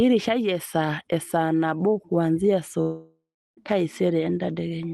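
From 2.81 s to 3.59 s the speech breaks off, which points to a likely long network dropout: about 0.76 s of audio never arrives. The receiver stretches the last sound into a fading buzz, and the final 0.36 s or so is near silence before speech resumes with the lost part skipped. On a spectrogram, harmonics smear into flat horizontal bands that fade into an empty gap; the waveform shrinks to a flat line. The call codec's band limit near 12 kHz is visible throughout.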